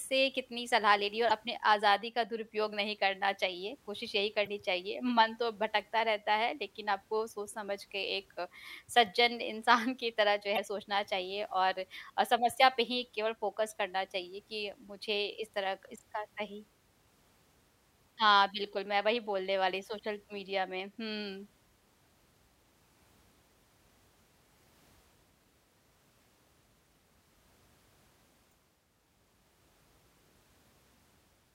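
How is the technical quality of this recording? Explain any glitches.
The speech has four short glitches from damaged data in a compressed stream, at 1.27–1.31 s, 4.43–4.47 s, 10.54–10.59 s and 28.49–28.53 s. At each, corrupted bytes derail the decoder until it resynchronises on a later frame. This produces a roughly 40 ms chirp or squawk, with a possible tiny skip ahead. On a spectrogram it appears as a brief broadband smear, and on the waveform as a jagged, discontinuous patch.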